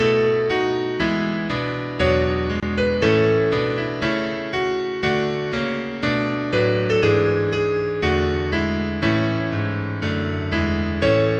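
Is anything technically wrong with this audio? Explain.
Yes. There is a gap at a join of encoded pieces at 2.60 s, where about 26 ms of silence cuts into continuous sound before it resumes exactly where it stopped. Separately encoded segments were joined without trimming the encoder's start delay and final-frame padding, leaving smeared edges.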